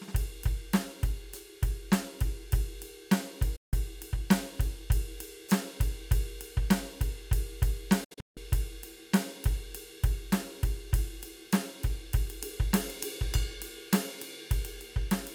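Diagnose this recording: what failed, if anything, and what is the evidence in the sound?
Digital broadcast dropout at the reception and decoding stage. The music fades out in 8 ms at 3.56 s and returns at 3.74 s. From 8.04 to 8.38 s it breaks into several short holes, the longest 160 ms. The receiver muted on corrupted frames, and that audio is lost.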